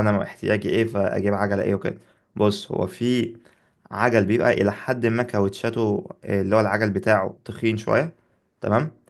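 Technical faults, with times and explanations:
No technical faults can be heard in this speech recording. Nothing in it needs a time or an explanation.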